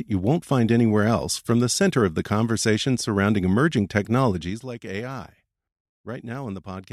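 From 4.27 to 4.64 s, just after "the conversation surrounding emerging", a gain reduction is applied in unsmoothed 3 dB steps, about ten per second, lowering the level by roughly 10 dB. Each jump leaves a small click, producing audible zipper noise over the speech.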